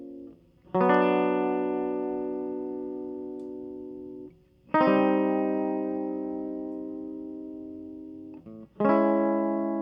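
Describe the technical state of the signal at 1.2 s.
At 1.2 s the music comes through intact, with no dropout, distortion or other technical fault at that point.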